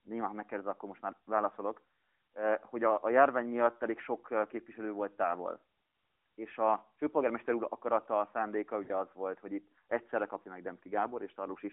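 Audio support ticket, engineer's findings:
Lost AMR speech frames, 8.84–8.91 s, after "úr akarata a szándéka", before "az volt hogy": radio errors failed frame checks, decoder repeated last parameters with falling gain. Brief smeared dip, consistent with two 20 ms frames; narrowband AMR line audible throughout.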